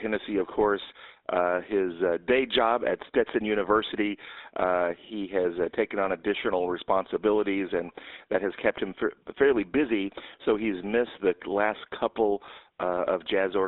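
The speech passes through a GSM full-rate codec from start to finish, with a line band of roughly 300 Hz to 3.7 kHz, which fits a 13 kbps GSM stream. Its pulse-driven model of the vocal tract leaves plainly audible buzzy, gravelly roughness and nothing bright above the band.

From 12.46 to 12.49 s, lost GSM frames cost about 20 ms of signal. The decoder fills the gap by repeating the last good frame's settings, so the sound briefly hangs as a rough, metallic ring.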